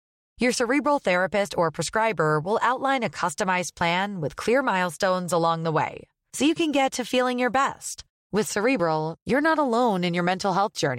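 At 3.81 s and 8.80 s, the speech skips briefly, losing roughly 15 ms each time. This is likely audio missing between chunks, with five-second chunks joined without a gap.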